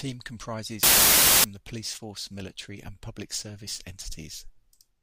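From 0.83 to 1.44 s the speech turns into loud, harsh broadband noise: samples built from the wrong bytes. With the byte order or alignment off, the fast-changing low bits become each value's large part.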